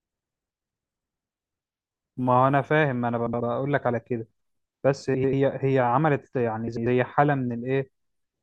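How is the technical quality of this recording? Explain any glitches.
Three brief glitches in the speech, all frames out of order: at 3.26 to 3.41 s, 5.14 to 5.34 s and 6.68 to 6.87 s, neighbouring runs of frames were decoded swapped. Each stretch plays with its halves exchanged (about 70 ms halves first, then 93 ms), so it sounds like a garbled flutter.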